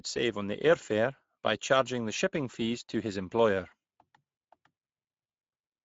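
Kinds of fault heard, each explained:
Speex codec: Throughout the speech the voice has the grainy, hoarse texture of a CELP coder that is short of bits for its excitation, and the damage is plainly audible. Nothing comes through above 7.7 kHz, and the upper band sounds like shaped noise rather than real detail, which fits a middle Speex setting near 17 kbps. Unlike a simple low-pass filter, this also roughens the voice itself, and it has no watery transform-codec swirl.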